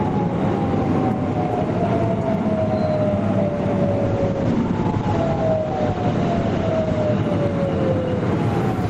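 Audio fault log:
throughout: gain pumping. The background level keeps rising in the quiet gaps and sinking each time a loud sound arrives, a swing of about 5 dB, so loud and soft moments sit closer together and the whole clip feels squashed. The likely cause is input gain set far too high, with a fast limiter or compressor clamping down on every peak and then letting the level creep back up once the peak passes.
4.06 to 7.29 s: call bitrate drop. The encoder's bitrate falls from 32 kbps to 11 kbps and stays at its lowest for about 3 s, as the call's bandwidth estimate shrinks and the codec must spend far fewer bits. The audible band narrows from 20 kHz to 8 kHz, so the sound turns muffled, and the coarser coding adds a rough, watery texture. Both effects persist until the bitrate recovers.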